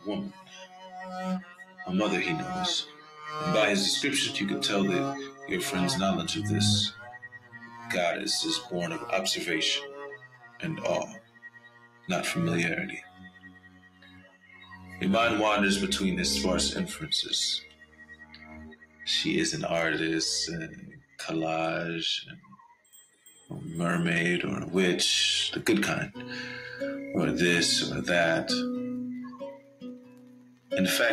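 The audio runs through a noise suppressor applied to music or sounds, and it's clearly a speech-tuned one. It treats steady material and tails as noise, so levels swing by roughly 15 dB as sudden attacks punch through while held parts sag, giving a pumping, thinned-out feel. You can hear the sound cut by the noise suppressor at 0.0–3.28 s, 5.29–15.01 s, 17.6–19.07 s, 20.68–23.5 s and 29.32–30.72 s. Sustained parts drop about 16 to 17 dB at worst and decays get clipped short, adding up to about 1.5 to 5 seconds inside each stretch.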